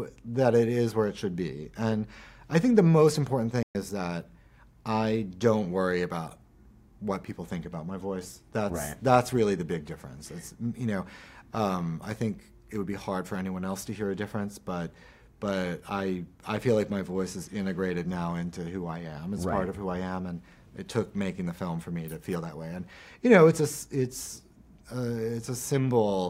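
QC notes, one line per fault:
3.63–3.75 s: playback stall. The sound cuts out in mid-flow for about 120 ms, a clean gap of silence rather than a fade or a burst of noise, and then carries on. The likely cause is the player briefly running short of data or its output thread being held up, so nothing reached the output until it caught up again.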